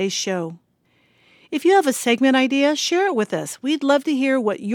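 Speech, with no technical fault to be heard anywhere in the clip. Nothing in the audio points to a problem in how it was captured, processed or delivered.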